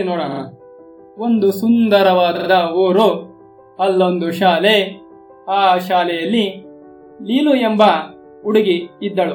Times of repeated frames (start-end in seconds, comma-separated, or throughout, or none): 0.30-0.38, 2.35-2.47